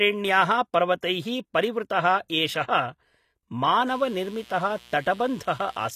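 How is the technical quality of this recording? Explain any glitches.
The technical quality is compromised: codec damage is plainly audible across the whole speech recording, and two localised glitches occur, a smeared attack near 1.01 s and a buzz in the final two seconds.

Throughout, the treble sounds synthetic rather than natural, with sibilants turning gritty or lispy, and nothing is present above 18.9 kHz. This is likely HE-AAC compression, at a bitrate that sounds like around 24 kbps. The codec keeps only the lower spectrum and invents the top by copying lower bands upward under a coarse envelope, so harmonics fail to line up across the crossover.

From 1.01 to 1.03 s, a brief hiss runs ahead of a sharp onset, blurring it over about 20 ms. This is pre-echo. The transform codec distributes quantisation noise across an entire block, and when a loud attack lands late in that block, noise scaled for the attack leaks into the quieter moment just before it, softening the transient.

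From 3.87 to 5.89 s, a steady, raspy mains buzz sits roughly 25 dB below the speech. It is built on 60 Hz, with harmonics stacked well up into the kilohertz range. Spiky interference from something like a dimmer, a rectifier or an unshielded connection enters twice per mains cycle, and those sharp pulses produce the rasp.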